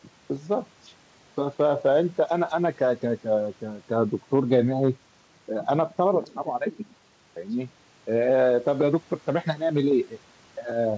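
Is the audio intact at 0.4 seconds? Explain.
Yes, at 0.4 seconds the speech is intact, with nothing beyond the ordinary sound of a WebRTC call path whose band stops at about 8 kHz.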